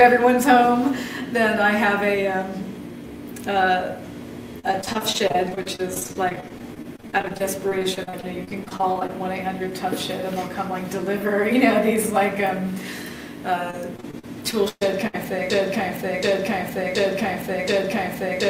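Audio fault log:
4.59–9.11 s, repeated packet loss (robotic sound): dozens of holes up to 41 ms, about a quarter of the span patched by stretching prior sound, giving choppy texture; spectrogram shows smeared, repeated slices.
13.71–15.16 s, repeated packet loss (robotic sound): a few holes, the longest 124 ms, filled by extending earlier sound; waveform shows copied stretches where audio should continue.
15.50 s to end, broken-record loop: a 0.73 s fragment repeats back to back, likely from a stalled stream resending its last piece; spectrogram shows identical blocks tiling.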